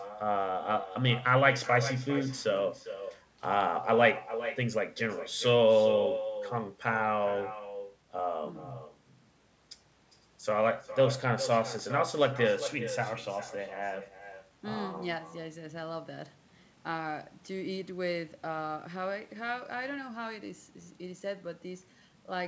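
Echo with no canceller runs through the whole speech clip: the far end's loudspeaker feeds its microphone and nothing removes it, so every phrase returns roughly 0.4 s later as a thinner copy about 11 dB down, heard alongside the call path's 8 kHz bandwidth.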